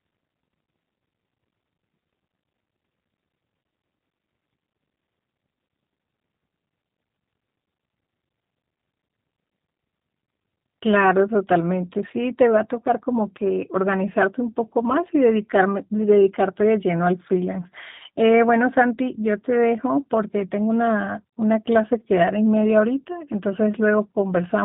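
G.729 codec damage runs throughout the speech. Nothing passes above 3.8 kHz, and each 10 ms frame is rebuilt from a vocal tract filter, a pitch predictor and a few pulses. That leaves a plainly rough, synthetic edge consistent with an 8 kbit/s G.729A stream.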